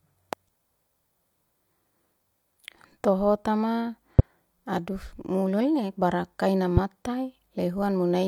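Three loud pops break into the speech, at 0.33 to 0.35 s, 4.19 to 4.22 s and 6.77 to 6.80 s, each a single sharp thump lasting under 30 ms and standing about 15 to 20 dB above the speech, strongest at 4.19 s. The likely cause is a sudden voltage pulse, such as static or a switch transient, added to the signal. Unlike a dropout or clipping, nothing is removed or flattened: the speech carries on intact beneath each pop.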